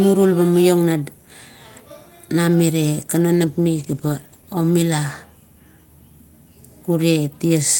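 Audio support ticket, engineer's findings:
Call bitrate drop, 3.36 to 5.53 s. Speech turns rough and smeared, worst for about 1.1 s, which fits the encoder being pushed from 32 to 15 kbps after the bandwidth estimate fell. Coarser coding until the rate recovers. Component: sender-side rate control.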